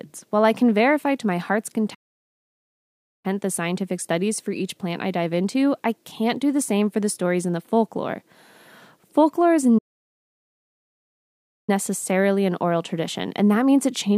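At 1.94 s the sound cuts out in mid-flow and stays silent for about 1.3 s, picking up again at 3.26 s. A longer gap follows at 9.78 s, lasting about 1.9 s before the audio resumes at 11.70 s. Both dropouts are most likely a playback stall, where the player ran short of data or its thread was held up, so nothing reached the output until it caught up.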